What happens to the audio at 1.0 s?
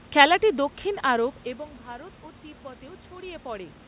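Around 1 s the audio is intact, and the only change is a natural shift in level as the talker moves relative to the microphone.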